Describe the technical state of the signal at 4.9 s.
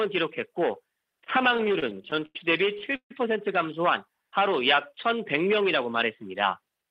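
A jitter buffer slow-down covers 4.16 to 5.07 s: the receiver stretched the audio by repeating single pitch periods to add 71 ms of reserve, so playback runs at 93% speed with unchanged pitch. The waveform shows cloned cycles, and the spectrogram shows harmonics held at steady frequencies but drawn out in time.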